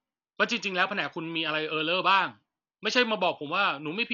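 Speech throughout sounds dull and rough, with nothing above 7 kHz and fluttering noise, likely from heavy Dolby Digital compression at a bitrate near 48 kbps.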